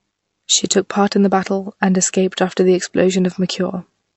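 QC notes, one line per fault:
Throughout, MP3 compression, likely from a low-bitrate encode. Nothing is heard above 8 kHz, so the speech sounds dull and s sounds lose their edge. The encoder ran short of bits and cut the treble at that fixed point. The codec damage is plainly audible. Weak frequency lines drop in and out from frame to frame, giving a watery, swirly texture. The damage fits a bitrate around 48 kbps.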